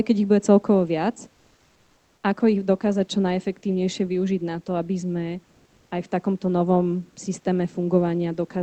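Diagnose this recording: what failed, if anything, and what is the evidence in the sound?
The room background gets replaced by comfort noise twice: 1.34–2.23 s, after "ich bude celkovo viac", and 5.45–5.91 s, after "na to aby sme". The room tone turns flat and featureless, shifting about 3 dB the second time. That's at the codec stage, likely discontinuous transmission with receiver-synthesized fill.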